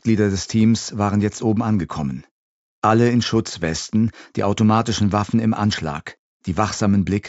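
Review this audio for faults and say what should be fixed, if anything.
No faults found; nothing needs fixing.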